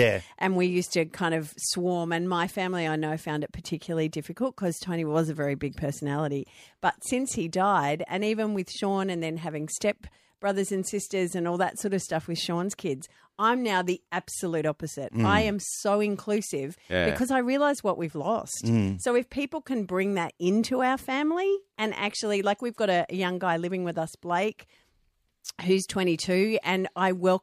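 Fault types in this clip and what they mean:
No faults are audible anywhere in this speech recording.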